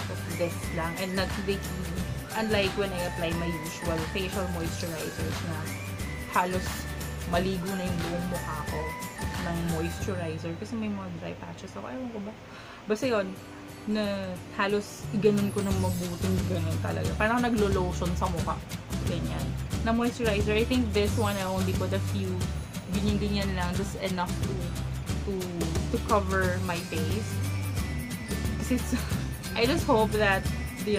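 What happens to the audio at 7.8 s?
Nothing goes wrong at 7.8 s; the audio plays through that moment intact, with no dropout, click, glitch or other fault.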